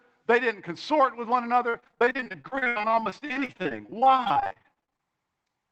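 From 1.69 to 5.01 s, repeated packet loss (robotic sound) chops the speech: dozens of short gaps, up to 79 ms, are patched with repeated sound. The result is a robotic stutter, with about 38% of that stretch concealed. On a spectrogram it appears as smeared, stretched frames broken by vertical seams, all beneath the call codec's 8 kHz ceiling. The waveform looks choppy, with repeated segments.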